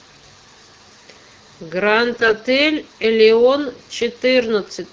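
From 2.13 to 2.34 s, AMR bit errors turn the speech hoarse, scratchy and gargly. The span fits about ten 20 ms frames. A few percent of the weakly protected bits arrived flipped, scattering the excitation pulses and skewing fine pitch, gain and spectral values. Pitch and level hold roughly steady through the AMR-WB coding. On a spectrogram, harmonics smear into noisy, broken bands, and the waveform loses its regular pitch periods.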